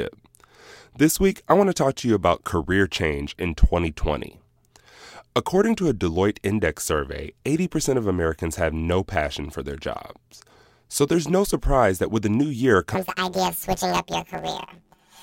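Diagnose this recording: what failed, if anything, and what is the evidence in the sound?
Sample-format conversion failed: planar audio read as interleaved. From 12.95 s, just after "with the new year", to the end, 10.88 ms blocks replay per channel, giving a robotic 91.9 Hz buzz.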